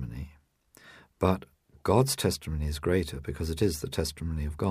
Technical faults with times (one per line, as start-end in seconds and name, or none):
none